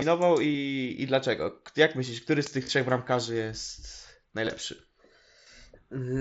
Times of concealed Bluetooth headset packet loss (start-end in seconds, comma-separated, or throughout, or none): 0.53, 2.63-2.69, 4.45-4.51